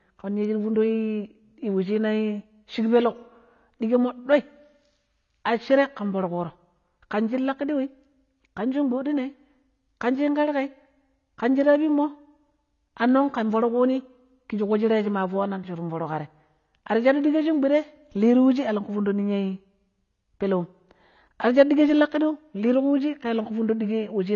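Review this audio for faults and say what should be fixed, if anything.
The speech sounds dull and smeared from start to finish, with a warbling, fizzy texture on sustained sounds and sibilants, and nothing above 7 kHz. The likely cause is AAC compression (AAC-LC) at a low bitrate, which fits about 24 kbps. At that rate the encoder lowers its cut-off and quantises the frequency lines coarsely against its hearing model. That leaves gaps or noise-filled bands that shift from frame to frame. To prevent it, export from the original source at a higher AAC bitrate or in a lossless format.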